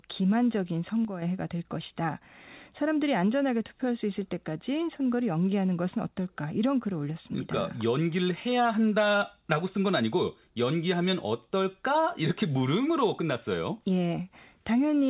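From 1.05 to 1.22 s the speech level drops abruptly by about 6 dB and recovers, likely one channel dropping out before the mono sum.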